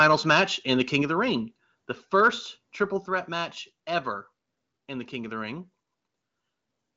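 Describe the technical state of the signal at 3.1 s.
At 3.06 s, voice and background drop suddenly by about 5 dB. This is a microphone volume step-down, likely software lowering input gain in one step.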